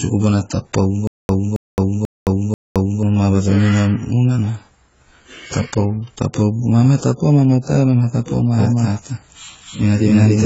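AAC compression runs through the whole clip: the speech is dull and smeared, with a warbling, fizzy edge on sibilants and nothing above 7.7 kHz. Heavy damage like this likely comes from AAC-LC coding at a very low bitrate, around 16 kbps, where the coder drops the top band and starves the rest.

From 1.07 s to 3.03 s comes a stutter with silent gaps: a 272 ms fragment plays four times, each followed by 217 ms of dead digital silence, repeating every 489 ms. This is likely a stalling stream or player replaying its last buffer on each retry, and whatever should have played there is lost.

From 8.60 s to the end, a doubled audio track appears: a second full-band copy of the speech enters abruptly, about as loud as the original and roughly 300 ms behind it, with no decay or room colour. The likely cause is a second, slower capture path mixed in with the first.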